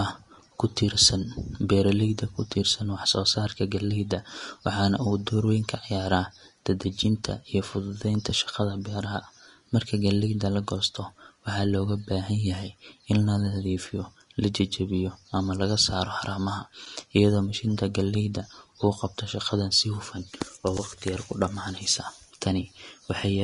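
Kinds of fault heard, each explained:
Vorbis compression: the speech was likely passed through a low-quality Vorbis encoder, consistent with a rate near 35 kbps, which removes everything above 10.6 kHz and quantises the remaining treble into coarse noise, so the voice sounds plainly hissy and grainy, with blurred consonant attacks.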